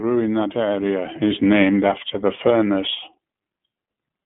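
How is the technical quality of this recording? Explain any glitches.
The technical quality is limited. One fault runs through the whole clip. The speech has passed through the iLBC codec. The band sits between about 150 Hz and 3.4 kHz, with nothing above 3.6 kHz, so it sounds narrow and telephone-like. Each short frame's excitation is coded on its own, which fits 20 ms frames at 15.2 kbps. The damage is plainly audible. The speech stays clear but sounds rough and slightly synthetic.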